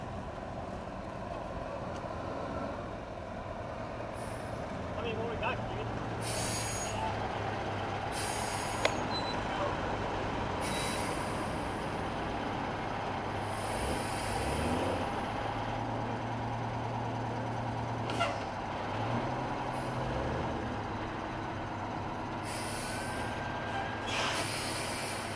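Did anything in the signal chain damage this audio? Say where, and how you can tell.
No, nothing along the chain seems to have touched this audio, and there's no stage I can point to as having left a mark on it.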